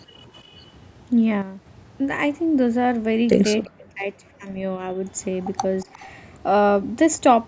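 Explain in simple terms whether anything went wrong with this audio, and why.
Yes, a few things went wrong in this speech recording.

From 1.42 to 1.66 s there is a sudden gain jump. The likely cause is a volume setting inside the system changing instantly instead of gradually. The voice and the background hiss both drop sharply together for about a quarter of a second and then come back, so the level seems to lurch rather than fade.

Between 3.64 and 4.96 s, the speech is suppressed in double talk. This likely happened because both people on the call spoke at once, and the echo canceller, the part meant to remove loudspeaker sound picked up by the microphone, could not tell them apart and turned everything down. About a second of the voice in that span is turned down, at its worst nearly disappearing. A shorter, milder dip of the same kind hits from 5.85 to 6.03 s.

From 5.8 to 6.08 s there is an echo leak. 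The likely cause is that one side had the call on a loudspeaker and its echo canceller let some of that sound slip back down the line. You hear a faint, delayed copy of the voice, trailing about a third of a second behind, as a brief ghostly scrap.

The missing deep bass comes from the call's normal microphone processing.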